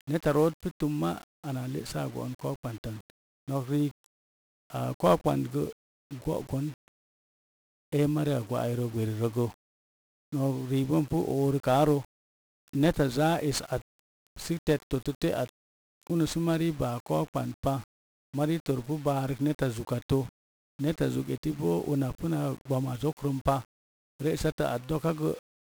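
From start to finish the speech has passed through 1-bit DFPWM compression, heavily damaged, at a rate that fits about 48 kbps. With only one bit per sample nudging an adaptive level up or down, broadband quantisation noise swamps the signal, leaving the voice fuzzy and crackly, its treble sunk in hiss.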